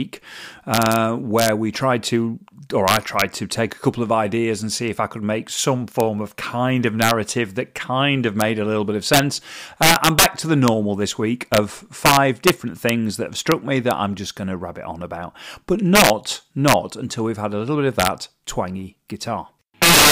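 Integer overflow runs through the whole clip. A gain stage pushes the signal about 10 dB past what the integer format can hold, and instead of being limited at full scale, any sample that exceeds the ceiling wraps around to the opposite extreme. Only around half a percent of samples go over, so the damage sits on the loudest peaks: each one becomes a violent, snapping crack, far harsher and more abrupt than ordinary clipping.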